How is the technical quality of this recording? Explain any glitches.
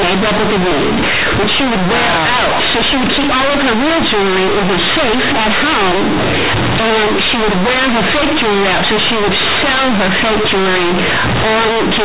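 The technical quality is poor: one decoding fault runs through the whole speech recording. Companded audio is read as linear for the entire clip. The A-law bytes are played as plain 8-bit samples with no expansion, so every sign change swings the output across roughly half its range. Quiet passages come out as loud as peaks, giving harsh, buzzy distortion and heavy noise in the pauses. The underlying G.711 telephone coding at 8 kHz is itself intact.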